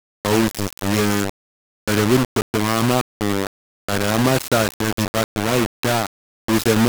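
A speech recording with heavy granular distortion from start to finish, consistent with low bit depth without dither. The quantisation error sits only about 5 dB below the signal and moves with it, so the distortion rises and falls with the speech rather than forming a steady hiss. Quieter passages break up into a coarse, sputtering texture, and the softest parts collapse toward silence. The likely cause is rounding to very few levels without dither, which fits a 3-bit quantiser.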